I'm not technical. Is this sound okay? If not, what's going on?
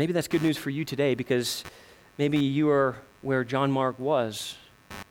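No. The computer recording this speech is leaking its own electrical activity into the audio. When the processor, graphics card or mouse changes how much power it draws, the ground shared with the audio circuit shifts, and that shift is recorded as sound. This is called computer activity noise. From about 0.31 s to the end, it shows up as a faint buzzing or chirping underneath the speech, pulsing about a hundred times a second and rising and falling with what the computer is doing, not with the speech.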